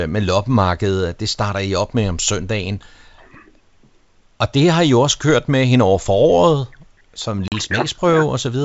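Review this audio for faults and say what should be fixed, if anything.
Packet loss on an ADPCM call, 7.48 to 7.53 s: about two packets (40 ms) were dropped and filled with silence, desynchronising the decoder's predictor and step size. The speech cuts to a hard-edged hole, then returns with brief, slight distortion. Packet loss concealment with a decoder state reset after lost frames would prevent this.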